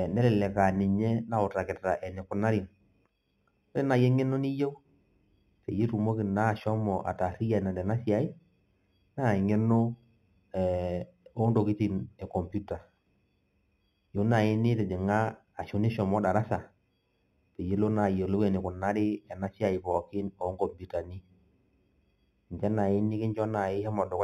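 Throughout the speech, imaging from linear upsampling leaves a faint metallic shimmer on sibilants. Straight-line interpolation, pointing to an 8 kHz source raised to 44.1 kHz, dulls the top of the band and mirrors it into 4 to 8 kHz, roughly 35 dB down. Unlike aliasing, the residue sits above the original band rather than folding into it.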